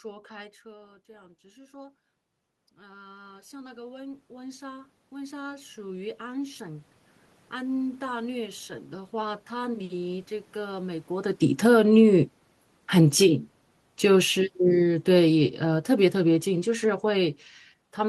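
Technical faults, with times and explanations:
0.62 to 6.88 s, automatic gain rising: just after the talker drops back, about 18 dB quieter, the gain control slowly pushes its gain up by about 20 dB over six seconds, so the voice and the room noise swell back up together rather than the voice alone.
11.41 to 18.08 s, automatic gain falling: the talker shifts position again just before this, the gain control finds the input too loud or its background noise too strong for its gain, and it eases down over the rest of the clip, so the voice and its background room noise sink together.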